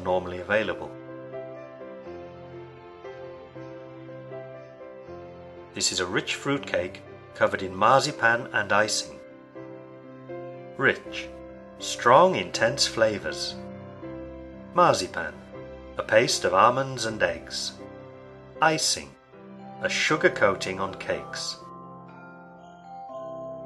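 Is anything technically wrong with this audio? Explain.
No, nothing stood out as technically wrong on listening.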